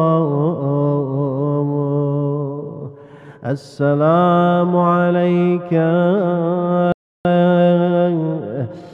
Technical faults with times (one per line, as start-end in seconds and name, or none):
6.92-7.25 playback stall
7.25-8.93 time-compressed catch-up